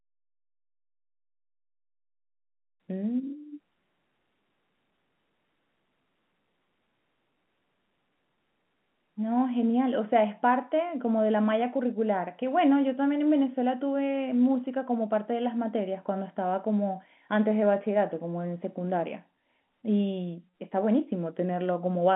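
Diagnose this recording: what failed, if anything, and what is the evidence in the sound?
No fault found.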